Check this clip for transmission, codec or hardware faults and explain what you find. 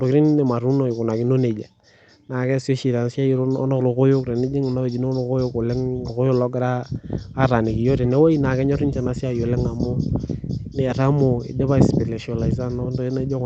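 Nothing stood out on listening to this speech clip; it sounds as a normal call connection would.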